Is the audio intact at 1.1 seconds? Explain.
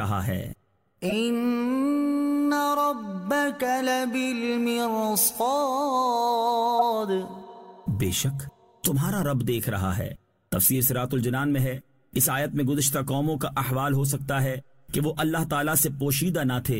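No. From 1.09 to 1.13 s a corrupt frame is decoded: damaged bits in a couple of compressed frames misplace energy across frequencies, giving a brief chirp or burst of noise peaking around -15 dBFS. A spectrogram shows a short, out-of-place vertical smear; the waveform, a jagged blip.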